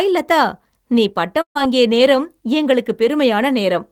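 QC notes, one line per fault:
1.41–1.57 s, burst of packet loss: right after "லதா நீ", about 140 ms of audio is lost and concealment fills the gap by extending the last sound and fading it out, leaving roughly 100 ms close to silence. Speech then resumes later in the utterance, with that stretch missing. On a spectrogram, the harmonics smear into flat horizontal streaks that fade to an empty band, then cut sharply back to normal speech. The waveform shows a decaying repeated pattern before a clean restart.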